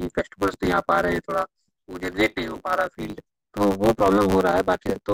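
A speech recording with a block size mismatch (truncated) that runs through the whole clip. A steady buzz sits at 100 Hz, the rate at which blocks pass between stages. The speech also runs fast, about 1.16 times normal speed, yet its timbre stays the same. One stage writes longer blocks than the next reads, so the tail of each block is discarded. The speed-up fits 512-sample blocks being cut short.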